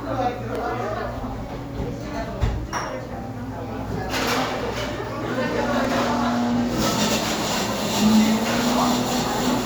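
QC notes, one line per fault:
0.55 s and 5.85 s: repeated buffer. At each time, a tiny slice of the sound plays twice in a row. The repeated piece is about 2.9 ms long, which fits a 128-sample buffer. New audio did not reach the output in time, so the device replayed its last block. Each repeat ends in a hard join. Because the slice is so short, it is heard as a brief click or buzz, not a stutter. A few milliseconds of audio are lost each time.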